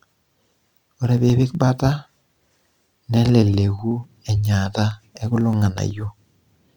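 From 0.06 s to 6.65 s, periodic USB or driver dropouts remove a tiny slice of audio, roughly half a millisecond, every 0.125 s. The skipped samples leave a discontinuity, heard as around fifty evenly spaced ticks over the speech.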